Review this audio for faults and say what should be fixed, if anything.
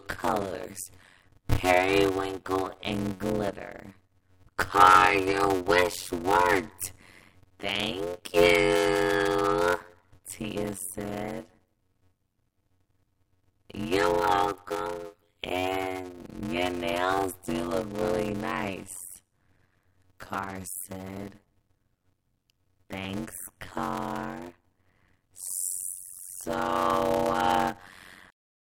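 A block size mismatch (padded) runs through the whole speech clip: one stage hands over shorter blocks than the next stage pulls, and zeros fill the remainder of each one. The sound points to roughly 256 written samples per longer read block. Every block therefore carries a brief silent gap, heard as a steady 91.9 Hz buzz, and the speech plays at about 0.533 times normal speed while keeping its timbre. Matching the block sizes configured on both sides of that interface would prevent this.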